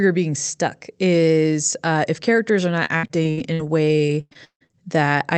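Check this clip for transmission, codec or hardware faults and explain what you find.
There is one transmission fault: repeated packet loss (robotic sound). It runs from 2.85 s to 4.75 s, just after "if characters are not". Thirteen gaps occur, the longest 158 ms. Each is patched by extending the previous sound. About a third of the stretch is concealed. The speech turns choppy and robotic, with pieces missing.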